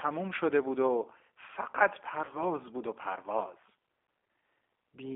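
G.729 coding runs through the whole clip, at 8 kbit/s. The encoder keeps only a vocal tract filter, a pitch predictor and a handful of pulses per 10 ms frame, then rebuilds the speech from those parameters. The damage is plainly audible: the speech sounds rough and synthetic. The band is confined to roughly 300 Hz to 3.5 kHz, which fits a telephone line, so the low warmth and all the upper brightness are gone.

VoIP packet loss concealed by the speech codec occurs from 2.25 to 2.38 s. About 40 ms of the stream went missing, which fits two 20 ms packets. The decoder filled the hole by extending its last pitch and filter settings while lowering the gain frame by frame, so the sound there is stretched into a fading buzz or coloured noise. Because each frame depends on the one before, the speech stays weak or distorted for tens of milliseconds after the packets return.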